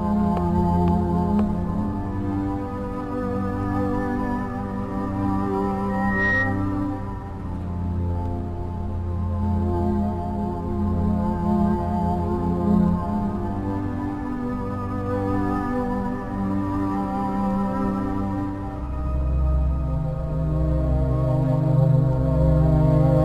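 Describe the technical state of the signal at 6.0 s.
Loudspeaker feedback squeal, 5.89 to 6.69 s: the mic is picking up its own speaker, so a 1.9 kHz tone swells to about 5 dB above the sound.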